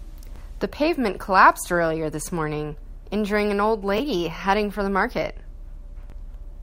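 Bluetooth stutter occurs at 0.36–0.38 s, 3.98–4.00 s and 6.10–6.12 s: each time, audio data arrived late or was lost, and the receiver refilled the gap by replaying its last stretch. That puts a brief repeated slice, about 20 ms, into the speech before it resumes as if it had continued, which points to a single lost packet each time.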